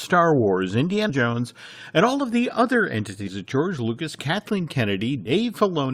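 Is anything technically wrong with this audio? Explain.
Yes. Compressed frames are skipped at 1.09–1.12 s, 3.27–3.30 s (after "all of the other") and 5.25–5.32 s. Missing or rejected frames make the speech jump ahead by roughly a tenth of a second at the first two and about 70 ms at the last, which fits 20 ms frames. Each join is a brief discontinuity where the waveform and spectrogram abruptly shift.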